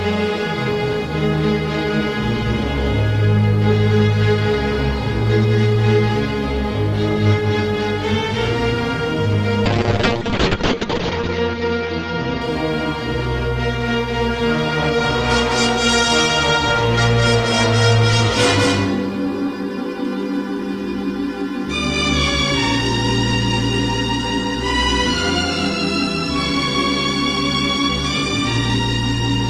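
Every sound in the audio is followed by a second, identical copy arriving about a fifth of a second later and roughly 5 dB quieter. The copy is full-band and dry, with no decay or room colour, so it reads as a distinct slapback rather than reverb. This is a doubled audio track, most likely the same signal captured a second time through a slower path and mixed back in about 200 ms behind the original. From 9.66 s to 12.71 s the audio turns rough and watery and loses its top end, sounding muffled for about 1.24 s at its worst before clearing. This is a call bitrate drop. The bandwidth estimate fell and the encoder was starved of bits. The sound points to a fall from about 32 kbps to around 6 kbps, with the coded bandwidth narrowing from 20 kHz to 8 kHz until the rate recovered.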